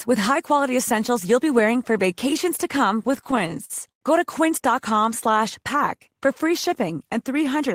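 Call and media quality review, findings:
Repeated stalls (stutter), 3.07–4.03 s, right after "for vacations to come": speech drags and hiccups about a dozen times, with held, fading sound filling roughly a quarter of the span, longest hold 95 ms. Jitter buffer underrun from late packets, with concealment stretching the audio and nothing lost.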